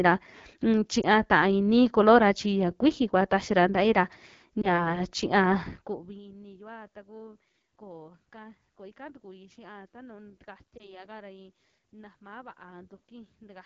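This speech clip passes through the AMR wideband (HD Voice) codec at 8.85 kbit/s, one of its two lowest rates. With so few bits for the pulse-driven vocal tract model below 6.4 kHz, the speech sounds plainly rough and raspy throughout, with noise-like fill above it. Lost AMR speech frames occur three times, at 1.01 to 1.05 s, 4.62 to 4.81 s and 10.77 to 11.03 s. Each time a single 20 ms frame fails its check, and the decoder reuses the previous pitch and vocal tract settings at reduced gain, giving a brief dip or warble before the voice settles.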